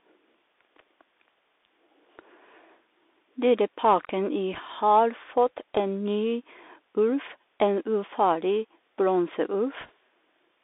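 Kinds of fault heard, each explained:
Bluetooth CVSD headset codec: The whole clip passes through the narrowband headset codec used on Bluetooth voice links. Each sample is coded as a single up-or-down step whose size adapts to the signal, which fits a 64 kbps CVSD link. The speech sits in a band of about 300 Hz to 3.6 kHz, so it sounds thin and boxy. The damage is plainly audible. Fast, bright sounds outrun the step size and turn rough, and a grainy hiss lies underneath.
Bit errors on a Bluetooth voice link: Some bits on the headset link were flipped in transit. In this coding every bit carries the same small weight, and its effect fades quickly. So there are no loud clicks. Instead, a brief rushing crackle rides over the speech. It appears from 4.53 to 4.58 s, at an error rate of roughly one or two percent. It returns, fainter, from 9.81 to 9.92 s, at an error rate below one percent.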